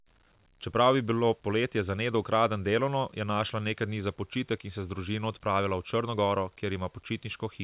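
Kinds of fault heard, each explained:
No faults can be heard anywhere in the audio.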